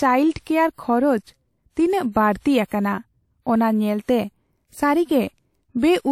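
Speech, with pre-echo from about 2.66 to 2.71 s: a 52 ms smear of hiss just before a sharp onset, where coarse block-wide coding noise leaks ahead of the attack. A spectrogram shows faint broadband energy preceding the transient, and the waveform shows low-level fuzz before it.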